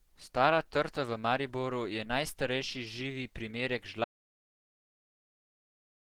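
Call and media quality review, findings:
Opus compression, throughout: likely a low-rate Opus encode, whose hoarse, grainy texture fits about 16 kbps in its hybrid speech mode. Bands are filled with noise instead of detail, so speech sounds rough and muffled. Damage is plainly audible.

Audio dropout to silence, 4.04 s to end: input likely lost, perhaps through a disconnect, link failure or mute, while the recorder kept writing silence. Speech cuts off mid-flow into silence with no room tone, and does not return.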